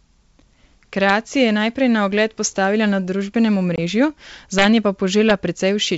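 Right at 1.09 s, just before "je najprej na ogled", there's a sharp crack from integer overflow. A peak went past the largest value the integer could hold and, instead of being limited, wrapped around to the opposite sign, so the waveform jumps across the whole range in an instant. This one barely crossed the limit, about 0 dB over, so it's a single snap. It happens again from 4.59 to 4.66 s, where the level is about 3 dB over the limit and the longer stretch gives a harsher, more sustained crackle. There's one more at 5.30 s, about 1 dB over, heard as another quick crack. All three are much nastier than ordinary clipping.

At 3.76 to 3.79 s there's packet loss on what sounds like an ADPCM call. About one packet, roughly 20 ms of audio, drops out and is replaced by a hard-edged silence. The decoder's adaptive predictor and step size then lose track of the sender's, so the speech comes back slightly distorted before settling. 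The G.722 wideband coding underneath sounds clean, with at most faint damage of its own.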